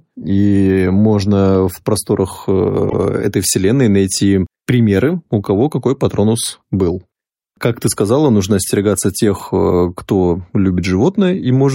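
At 2.89 to 2.94 s, between "можно в просторах" and "этой вселенной найти примеры", there are repeated frames. A block of about 52 ms of the speech plays, then plays again at once. The length fits a run of two compressed frames sent or written twice. The decoder simply replayed that stretch. It is heard as a brief stutter, a tiny hiccup in the flow. The repeat makes the clip 52 ms longer.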